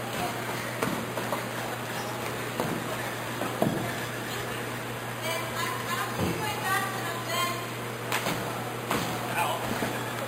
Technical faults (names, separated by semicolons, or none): imaging from sample-and-hold upsampling